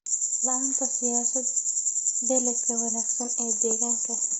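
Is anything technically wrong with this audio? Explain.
Yes. Throughout the speech the voice sounds rough and grainy, with noise filling the gaps between pitch harmonics and no content above about 7.8 kHz. This is likely low-delay AAC compression (AAC-ELD). Its short analysis frames cannot separate closely spaced harmonics well, and at the heavy damage level heard here, which fits a bitrate near 16 kbps, the encoder lacks the bits to code them cleanly. The result is that grainy texture and the dulled top band.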